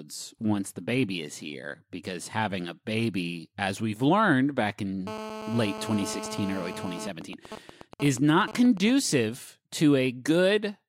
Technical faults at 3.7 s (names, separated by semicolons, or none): none